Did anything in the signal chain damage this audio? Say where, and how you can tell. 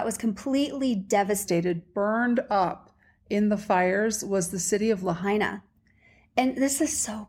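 Yes. A section at the wrong speed runs from 1.46 s to 5.23 s. There the speech plays at 0.893 times normal speed. Pitch drops about two semitones and the pace slows with it. The likely cause is a playback or edit stage on the wrong clock.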